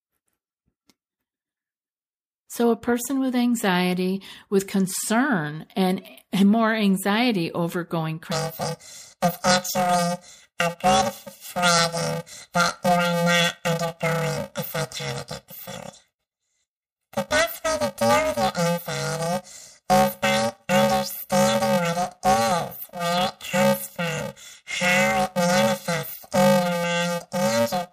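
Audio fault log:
8.32–27.92 s, planar audio read as interleaved: after "more anxiety over going" the speech becomes a robotic 345 Hz buzz. Its 2.9 ms channel blocks, fitting 128 samples each, are misread as alternating pairs.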